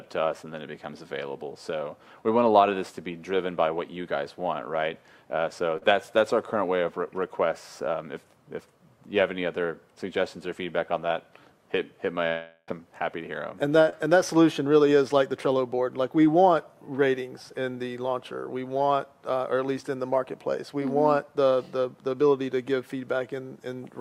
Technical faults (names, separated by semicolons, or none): short concealed packet loss; long network dropout